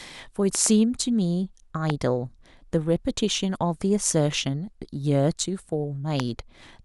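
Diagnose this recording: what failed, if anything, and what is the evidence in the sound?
Sharp loud pops sit over the speech, which continues underneath: a double pop at 0.55–0.68 s, then single pops at 1.90–1.92 s and 6.20–6.22 s, peaking around 15 to 20 dB above it. These are likely voltage spikes in the analogue wiring.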